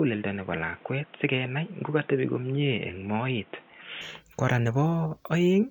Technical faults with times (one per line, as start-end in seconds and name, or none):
0.00-4.01 input switched to a poorer device